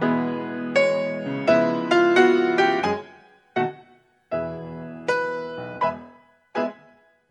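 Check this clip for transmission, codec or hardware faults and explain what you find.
No transmission, codec or hardware faults can be heard here.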